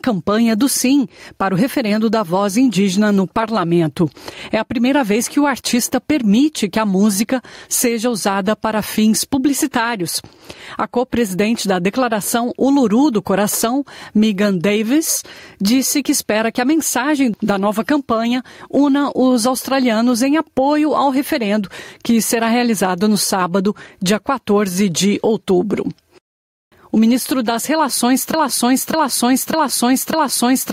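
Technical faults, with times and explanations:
Throughout, gain pumping: the level swings by roughly 10 dB, with quieter passages and the background in the gaps swelling up, then ducking under each loud sound. The likely cause is input gain set far too high, with a fast limiter or compressor clamping down on loud moments and squashing the dynamics.
28.34 s to the end at 30.72 s, broken-record loop: a fragment of about 0.6 s plays back to back four times, with the audio that belonged there lost. This likely comes from the player, encoder or stream stalling and resending the last chunk it held.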